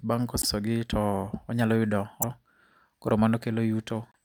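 Broken MP3 bit reservoir at 0.41–0.45 s, just before "gi to onyalo yudo", at 2.21–2.24 s, just after it, and at 4.12–4.16 s. The speech skips ahead with a brief glitch, likely because frames were cut and the next frame read another frame's borrowed bytes.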